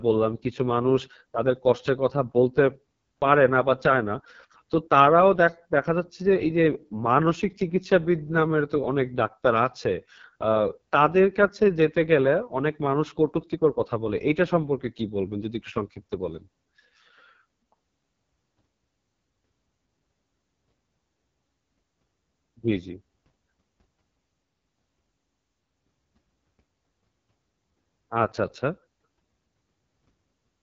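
From start to finish, the speech carries AMR wideband (HD Voice) codec damage. The coder models the voice with pulses through a vocal tract filter. Here it sounds rough and raspy, which fits its lowest 6.6 kbit/s mode. Nothing remains above 7.5 kHz.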